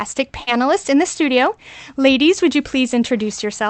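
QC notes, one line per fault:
0.43–0.50 s, short concealed packet loss: a brief smear just before "in the studio", where the sound carries on unnaturally and then blends back. About 40 ms of audio reached the decoder too late, so the receiver extended the preceding sound to cover the gap.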